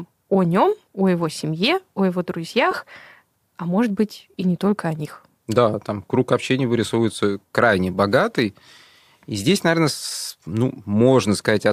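A speech clip with lost LE Audio frames at 2.71 to 2.73 s: about 15 ms of sound, which fits two 7.5 ms frames, is replaced by a brief noisy smear. The waveform shows a short patch of randomized energy, and the spectrogram a thin vertical band of smeared noise where the harmonics blur. The light graininess of the LC3 compression, likely the Bluetooth link's codec, is faintly audible throughout.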